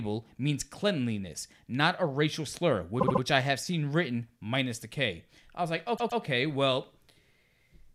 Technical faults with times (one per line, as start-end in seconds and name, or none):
2.99-3.21 repeated frames
5.96-6.21 repeated frames